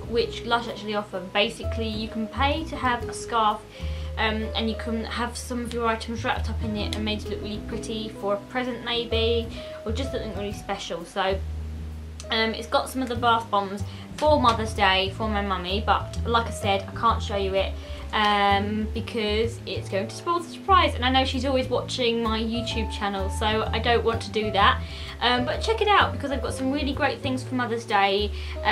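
No technical faults can be heard anywhere in the recording.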